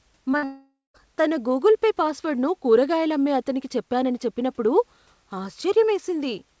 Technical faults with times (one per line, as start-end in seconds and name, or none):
0.32-0.35 short concealed packet loss
0.37-0.44 burst of packet loss
0.44-0.96 long network dropout